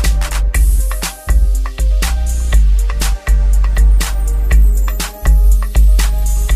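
No technical faults can be heard anywhere in the audio. There is nothing to point to in time and no cause to name.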